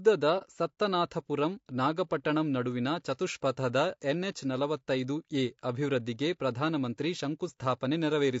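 It's a speech clip, and the whole thing has a rough, grainy edge, with noise filling in between the harmonics and a top end that sounds thin and a bit synthetic. That's plainly audible codec damage, likely from low-delay AAC compression (AAC-ELD), and the level of it fits a bitrate around 32 kbps. Early on, from 0.38 to 0.43 s, there's a short soft-edged dropout just before "ಸತ್ತನಾಥಪುರಂ ನಾಗಪಟ್ಟಣಂ ನಡುವಿನ ಚತುಷ್ಪಥದ". That's AAC frame loss with muting: the missing spectrum is zeroed, so the overlapping windows fade the sound down and back up. The gap is consistent with a single lost frame of about 30 ms.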